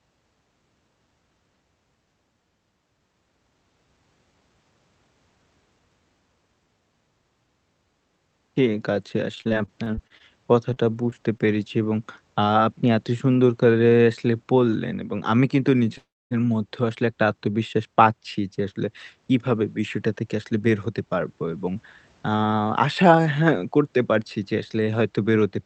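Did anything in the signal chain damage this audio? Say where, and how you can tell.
Yes. Repeated packet loss (robotic sound), 9.35 to 10.22 s, a network fault: speech turns choppy as about a quarter of it is patched from the preceding sound, with gaps up to 30 ms.

Short concealed packet loss at 10.74, 11.10 and 11.38 s, also network: each brief smear is roughly 20 ms of lost audio, filled by continuing the previous sound and then blending back.

Call audio freeze, 15.98 to 16.33 s: a fading buzz and then about 250 ms of silence, after which speech resumes intact, 331 ms late. Delayed packets likely emptied the jitter buffer.

Jitter buffer speed-up, 20.22 to 21.76 s: speech runs at 109% speed with unchanged pitch, as the buffer trims pitch periods, around 150 ms in total, to cut the delay.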